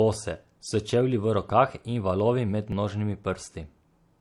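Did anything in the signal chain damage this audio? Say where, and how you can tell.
Yes. At the codec stage, throughout, it sounds like transcoding between lossy codecs: layered smearing and swishy artefacts at once, likely an MP3 pass re-encoded to HE-AAC.

At the buffer stage, tiny jumps in the speech at 1.49 s and 2.72 s point to a likely dropped buffer (overrun), each losing a few milliseconds.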